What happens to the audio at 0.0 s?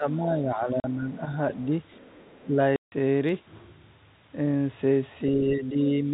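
Speech suppressed in double talk affects the opening, from 0.0 to 0.06 s. The level of the speech dips by roughly 10 dB for under a tenth of a second, then recovers. The likely cause is an echo canceller that heard both ends active at once, could not tell this talker from loudspeaker echo, and pulled the level down. Through the telephone band, which stops at 4 kHz, the start sounds briefly quieter.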